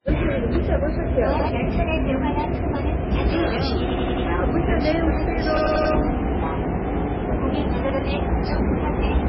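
MP3 compression runs through the whole clip, most likely from a heavily squeezed encode. Nothing sounds above about 5.6 kHz, a hard ceiling where the encoder has cut the treble to save bits, and the sparse bit budget points to a very low rate of around 16 kbps. Weak frequency components drop in and out from frame to frame, so the sound takes on a watery, swirling texture, and sharp attacks smear.

Repeated buffer faults follow, in four places. At 1.39 s and again at 7.90 s, a 93 ms slice plays one extra time. At 3.90 to 4.27 s and 5.57 to 5.94 s, the same slice repeats four extra times. Each time, fresh audio failed to arrive, so the device replayed its last block, which fits a 4096-sample buffer. The hard joins produce a rapid stutter at roughly 93 ms intervals, and about 0.1 s or 0.4 s of real audio is lost at each.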